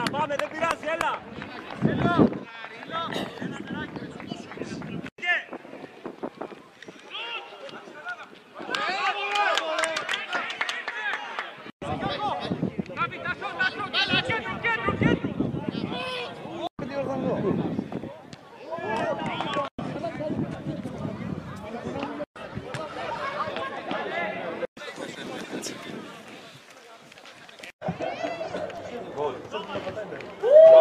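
Near the end, from 28.38 to 29.17 s, the audio carries five short, evenly spaced ticks, about six a second, the longest lasting around a millisecond. These are CD scratch ticks: a surface blemish corrupts more data than error correction can repair on each disc revolution, so the player briefly patches or mutes those samples.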